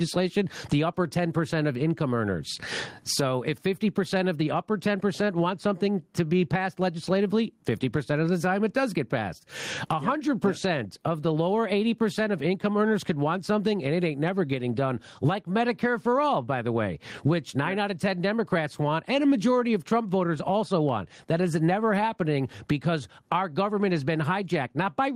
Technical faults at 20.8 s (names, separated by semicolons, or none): gain pumping